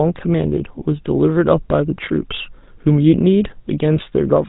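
The speech runs through the GSM full-rate codec for its whole length, with the excitation rebuilt from sparse regular pulses at a rate that fits 13 kbps. That leaves a plainly audible buzzy, gravelly roughness and cuts away everything above 3.8 kHz.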